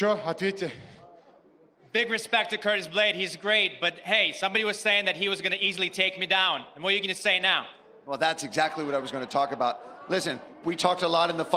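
Nothing here jumps out as a technical fault, so there's really nothing to point to along the way.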